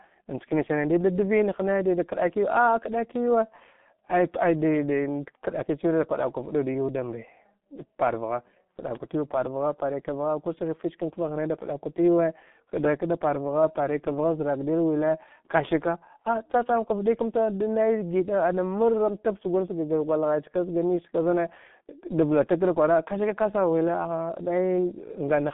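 G.723.1 codec damage runs throughout the speech, heavy from start to finish. Nothing survives above 3.8 kHz, the band sits at roughly 150 Hz to 3.6 kHz, and the slow, coarse voice model, consistent with a 6.3 kbit/s rate, leaves voices muffled and hoarse, consonants smeared.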